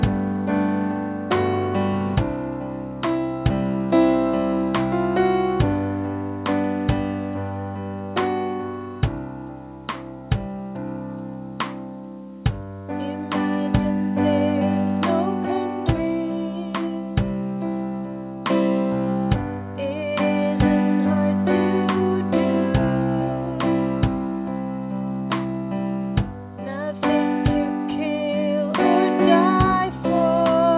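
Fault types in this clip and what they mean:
No faults can be heard; the audio has come through a call path that sounds like G.711 A-law at 64 kbps, so it carries that codec's usual coding noise and has nothing above 4 kHz.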